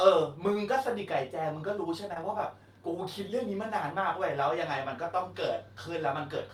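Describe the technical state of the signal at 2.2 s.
Around 2.2 s there is short concealed packet loss, spanning 2.14 to 2.18 s. A few hundredths of a second of speech arrived too late to decode, so the receiver extended the preceding sound to fill the gap, then crossfaded back. It is heard as a brief smear.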